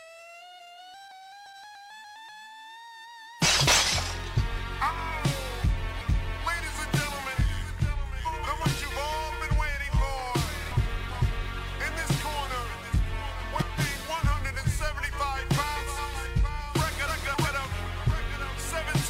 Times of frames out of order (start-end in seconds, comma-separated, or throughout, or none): 0.40-0.78, 3.42-3.83, 8.25-8.66, 13.40-13.80, 15.77-16.17, 17.07-17.47